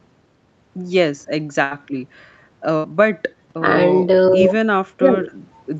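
A burst of packet loss hits this speech clip at 1.63 to 1.83 s and again at 2.76 to 2.94 s: each time a run of packets failed to arrive in time, so the receiver stretched the last sound for about 73 ms, fading it into a held buzz or hiss, and when the audio picked up again about 60 ms of the original was gone, leaving a skipped stretch rather than a clean pause. Jitter buffer speed-up follows from 1.89 to 2.22 s, where the receiver, holding more audio than its target, trimmed short pitch-period slices to catch up, running the speech about 11% faster at an unchanged pitch and removing roughly 40 ms, so that passage sounds hurried. The call microphone processing is audible in a band that stops at 8 kHz.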